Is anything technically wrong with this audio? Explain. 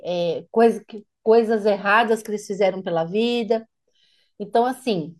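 No, nothing technically wrong can be heard in this speech recording. There are no faults to point to at any moment in the clip.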